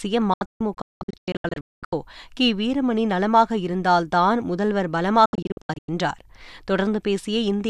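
From 0.34 s to 1.93 s the speech breaks into a rapid series of silent holes, each snapping shut with a very quick fade of about 3 ms. Roughly a second of sound vanishes across that 1.6 s stretch, the longest gap about 0.22 s. This is a digital broadcast dropout: the receiver muted whenever frames arrived corrupted and resumed on clean ones. A shorter burst of the same dropout, about 0.38 s lost over 0.62 s with gaps up to about 0.1 s, hits between 5.26 s and 5.89 s.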